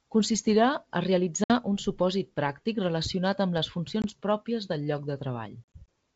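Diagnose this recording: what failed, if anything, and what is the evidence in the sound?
The network stage failed, causing packet loss on an ADPCM call; the G.722 coding itself sounds clean. Hard-edged silent holes cut the speech at 1.44–1.52 s (60 ms, about three packets) before "un supòsit pràctic relacionat", at 4.02–4.05 s (20 ms) before "pròpies del lloc", and scattered over 5.65–5.89 s (80 ms lost, longest run 40 ms). The waveform drops flat, and a spectrogram shows blank vertical strips. The receiver's adaptive predictor and step size then lag the sender's, so the sound resumes briefly off.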